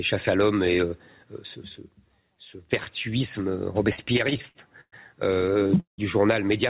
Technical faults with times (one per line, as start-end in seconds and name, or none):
3.96-4.94 repeated stalls (stutter)
5.46-6.00 repeated stalls (stutter)